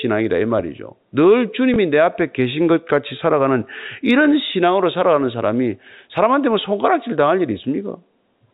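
At 1.74 to 1.76 s there is a packet loss with the last packet repeated. About 20 ms of the speech stream went missing, which fits a single lost packet. The receiver filled the gap by playing the previous 20 ms again. That copy is unlikely to line up with the pitch cycle. The result is a small blip, too short to build into a buzz. The G.711 telephone band carrying the speech stays narrow throughout, with nothing above 4 kHz.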